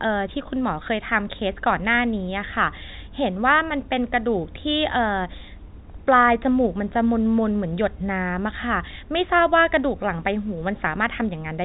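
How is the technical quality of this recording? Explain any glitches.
No glitches are audible; the speech sits in a narrow telephone band with nothing above 4 kHz, as expected from G.711 phone coding.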